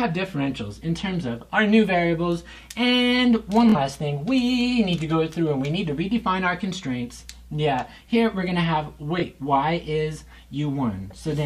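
Two Bluetooth stutter spots, at 3.69–3.75 s and 9.20–9.24 s: dropped packets make a short slice repeat as a brief buzz, roughly 46 ms and 23 ms lost.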